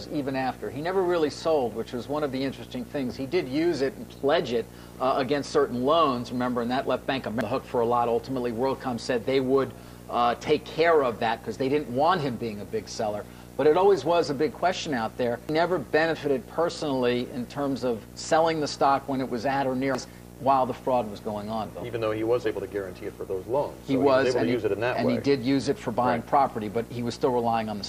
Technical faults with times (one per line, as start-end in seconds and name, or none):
7.41 damaged data in a compressed stream
15.49 damaged data in a compressed stream
19.95 damaged data in a compressed stream